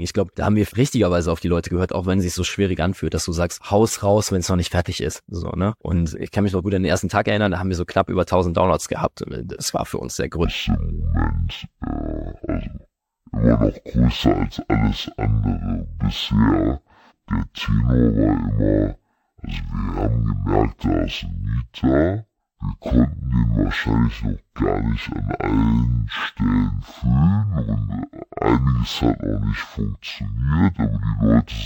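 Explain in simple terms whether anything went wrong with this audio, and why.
Stereo read as mono, from 10.4 s to the end: the left and right channels got read as one stream, sample after sample. So the speech plays at half speed and a full octave lower, with a faint higher-pitched copy riding above it.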